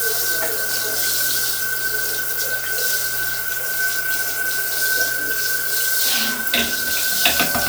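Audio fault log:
No technical faults can be heard anywhere in this recording of sounds.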